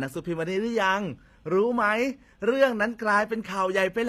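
Across the whole clip the speech has the marks of HE-AAC compression at a low bitrate, likely the codec coding only the lower band and synthesising the treble by spectral band replication, which fits a rate around 24 kbps. The upper range is copied up from lower bands and shaped by a coarse envelope, so its harmonics don't line up with the real ones. The s sounds come out gritty and lispy, with a metallic sheen that is plainly audible.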